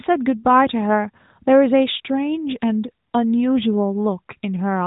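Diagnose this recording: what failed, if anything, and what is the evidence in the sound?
Nothing in this speech recording has failed, and no stage of the chain shows a fault. What you hear is a working AMR narrowband mobile codec path: nothing above about 3.8 kHz, with only light codec colouring that fits its highest 12.2 kbps mode.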